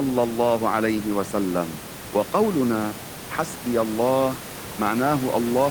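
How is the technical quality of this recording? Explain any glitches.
No technical glitches turn up in this speech recording, and the only thing beneath it is the room's own background noise, sitting about 12 dB below the speech as part of the recording rather than any fault of the system.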